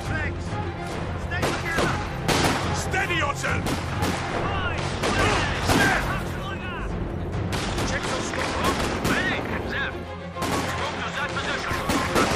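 Nothing in this one snags the ear at all, so there's no technical fault to walk through here.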